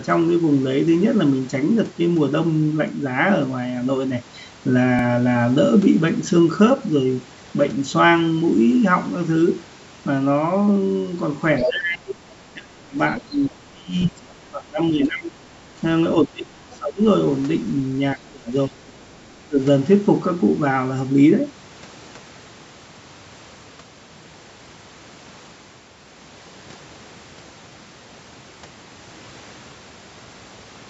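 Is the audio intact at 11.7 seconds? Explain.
No. From 11.58 to 11.71 s the other side's voice leaks through at only about 5 dB below the talker, likely echo the canceller missed, which adds a second voice rather than removing sound. Overlapping it, from 11.63 to 12.25 s, speech is suppressed in double talk: the talker dips by up to about 25 dB, likely because the canceller ducked both voices at once, which leaves a dip instead of extra sound.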